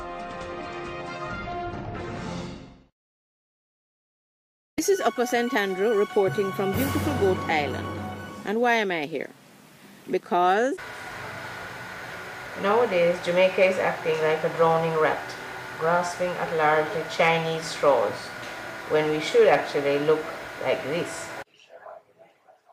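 Nothing in the audio stood out as a technical problem on listening.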